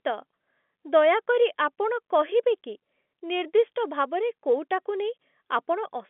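No technical faults can be heard in this speech. It comes over a G.711 telephone line, so the sound is held to roughly 200 Hz to 3.5 kHz with nothing above about 3.8 kHz, and any coding grain is faint at most.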